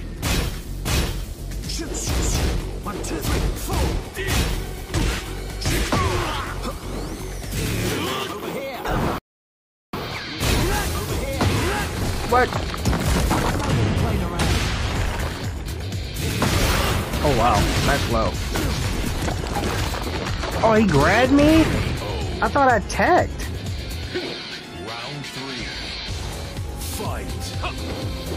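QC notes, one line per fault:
9.18–9.93 s, rebuffering stall: playback drops to silence for about 0.75 s, then picks up exactly where it stopped, with nothing skipped. The player has run out of downloaded audio and waited for more to arrive, adding that pause to the running time.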